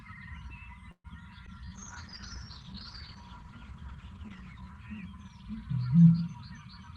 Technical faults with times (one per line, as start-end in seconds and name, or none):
0.91-1.07 call audio freeze
1.46-1.50 skip ahead
1.58-1.81 jitter buffer slow-down
1.81-5.67 call bitrate drop